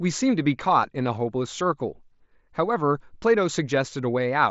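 No faults; the speech arrives over a Bluetooth mSBC headset link, so nothing sits above about 7.7 kHz and louder syllables carry a faint codec grain.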